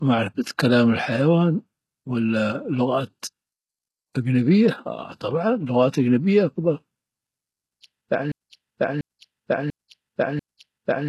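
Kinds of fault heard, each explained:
HE-AAC compression: The encoder likely coded only the lower spectrum at a very low bitrate, one that fits about 16 kbps, and rebuilt the treble by copying lower bands upward. The damage is heavy: s sounds turn gritty and metallic, and nothing reaches above 12.3 kHz.
broken-record loop: The player or stream likely stalled and kept resending the last fragment it held. From 8.32 s to the end, a 0.69 s piece repeats back to back four times, and the audio that should have played there is lost.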